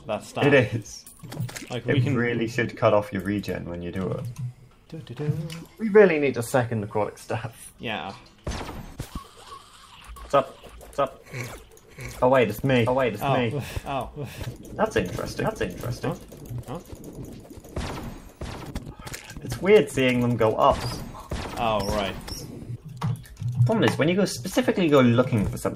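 A doubled audio track runs from 10.16 to 18.70 s: a second, somewhat quieter copy trails by roughly 0.7 s, likely from a slower capture path mixing the audio in again.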